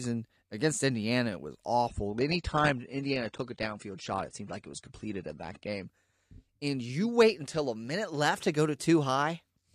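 From 1.88 s to 5.88 s the adaptive stream switched to a lower bitrate, likely because the connection slowed, and the player fetched a leaner encoding before stepping back up. The speech suddenly loses its top end, with nothing above 9.8 kHz, as codec artefacts rise, which fits a fall from roughly 96 to 32 kbit/s AAC. Both transitions are abrupt, with no gap in the audio.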